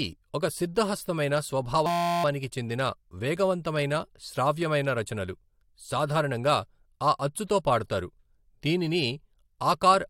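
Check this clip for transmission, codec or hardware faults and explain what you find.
One hardware-level fault is present in the speech. From 1.86 to 2.24 s, just after "ఒక సిద్ధహస్తమైన" and before "చెందిన వేగవంతమైన శ్రావ్యమైన రచనలు", there is a system hang loop. The driver stalled while the output device kept replaying the same ring buffer, so one 5.8 ms slice repeats dozens of times, which fits a 256-sample buffer. At a 172 Hz repeat rate this is heard as a steady, pitched buzz. Speech resumes with essentially nothing skipped.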